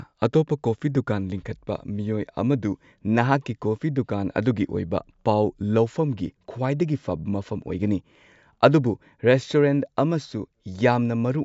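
No technical faults are audible.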